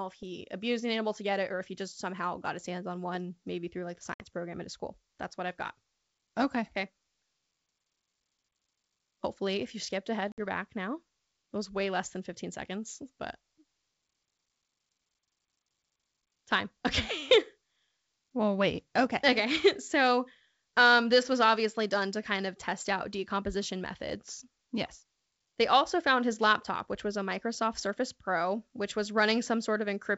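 At 4.14 s and again at 10.32 s there's packet loss on an ADPCM call: roughly 60 ms drops to hard-edged silence, then the speech returns slightly distorted because the decoder's predictor and step size have drifted from the sender's.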